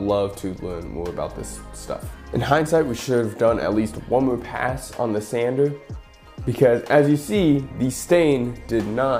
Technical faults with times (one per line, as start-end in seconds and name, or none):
none